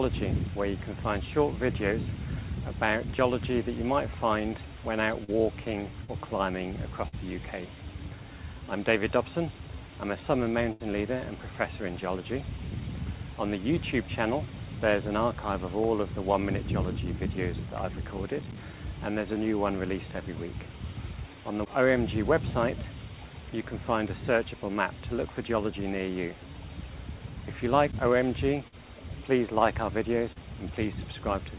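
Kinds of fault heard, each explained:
Short concealed packet loss: roughly 40 ms of audio at a time failed to arrive and was filled by extending the preceding sound, then crossfaded back, heard as brief smears or wobbles at 5.24, 6.04, 7.08 and 30.32 s, through a narrowband path with nothing above 4 kHz.
Burst of packet loss: a run of missing audio, about 80 ms at 10.72 s and 40 ms at 28.68 s, bridged by continuing the last sound and fading it, so a held buzz or decaying hiss replaces the lost stretch before playback resumes further on.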